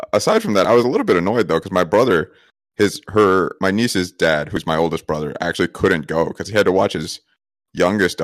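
Audio missing between chunks occurs at 0.65, 1.63, 2.61, 3.59, 4.57, 5.55 and 6.53 s, a skip roughly every second, such as between "little bit annoyed though" and "my brother his her", and just after "my oldest brother". Each time around 20 ms of speech drops out and the two sides butt together with no gap. The likely cause is a recorder handling audio in one-second chunks and losing a sliver at each handover.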